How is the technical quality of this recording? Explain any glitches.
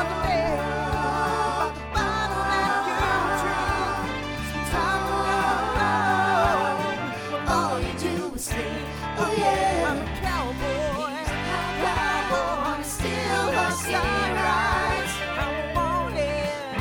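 Nothing here jumps out as a glitch; the recording runs along smoothly with no dropouts, clicks or other hiccups to point to.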